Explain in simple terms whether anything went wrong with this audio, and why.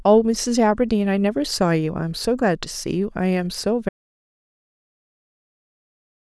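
At 3.89 seconds the speech stops abruptly, mid-flow, and from there to the end of the clip there is nothing at all: not even the faint background hiss of the room remains. This is an audio dropout to silence. The likely cause is that the sound input was lost, perhaps through a loose connection, a failed link or an accidental mute, while the recording kept running and filled the rest with pure silence. Whatever was said after that point is gone.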